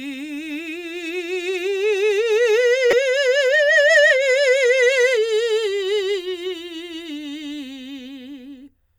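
Damaged data in the compressed stream of this music, 2.90 to 2.93 s: corrupted bytes knock the decoder out of frame sync, producing a brief glitch before it relocks.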